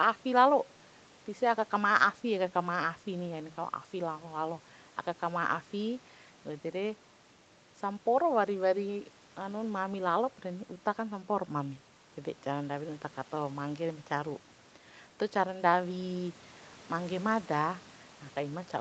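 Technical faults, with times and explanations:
The speech carries the ordinary marks of a call chain, with the lowest bass trimmed by the microphone processing and nothing above about 8 kHz after the codec, and nothing beyond that can be heard to have gone wrong in the signal.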